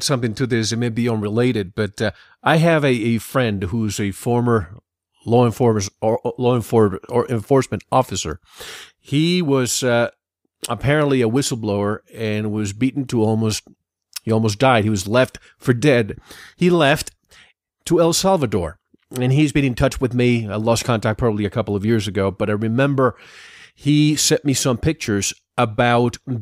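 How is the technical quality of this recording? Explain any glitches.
No glitches: the speech recording has no audible technical faults.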